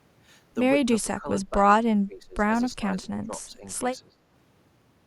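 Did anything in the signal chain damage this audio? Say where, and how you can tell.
Yes: speech suppressed in double talk, at 1.02–1.66, 1.86–2.43, 2.71–3.66 and 4.08–4.22 s, in call processing. The speech dips by roughly 15 dB, nearer 25 dB in the second stretch. An echo canceller likely could not separate the near-end talker from the overlapping far-end echo and attenuated both.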